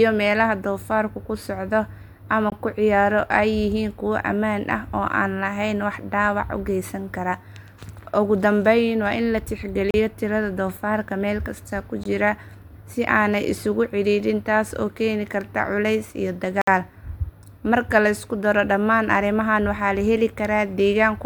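The speech drops into a block of digital silence four times: at 2.50 s for 20 ms, 9.91 s for about 35 ms, 12.04 s for 20 ms and 16.62 s for 60 ms. Samples were zeroed with no fade, so the sound cuts out and back abruptly, and the longer gaps open into short holes.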